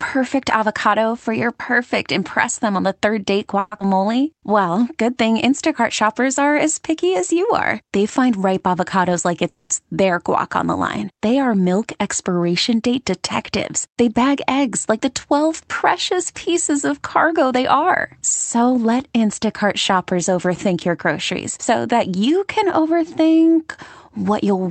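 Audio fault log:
3.59 to 3.73 s, call audio freeze: The sound stalls and the last fragment is stretched into a fading buzz for about 120 ms. Nothing is lost. The likely cause is late packets draining the jitter buffer, so playback waited and resumed where it stopped.
3.79 to 3.82 s, skip ahead: Playback jumps forward almost without a gap. Roughly 70 ms of audio is gone, and the two sides are butted together. A stretch was dropped while later audio was already waiting, cutting the delay by about 50 ms.
3.83 to 4.24 s, jitter buffer slow-down: The sound drags at 88 percent speed while the pitch stays the same. Repeated pitch periods add 55 ms, drawing sounds out as the buffer rebuilds its reserve.
9.08 to 9.49 s, 13.41 to 15.01 s and 17.53 to 18.92 s, jitter buffer speed-up: After "find ripe", after "are milk expiration date", and at 17.53 s, the audio hurries at 111, 108 and 110 percent speed, with the pitch unchanged. 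Removing short pitch-period pieces trims the excess delay. About 50 ms is cut from the first stretch and about 150 ms from each of the others.
9.49 to 9.72 s, call audio freeze: Just before "their guac on the", the sound is held as a decaying buzz that falls to about 70 ms of silence. The whole hold lasts about 210 ms, and nothing is missing. The likely cause is packets arriving late enough to empty the buffer.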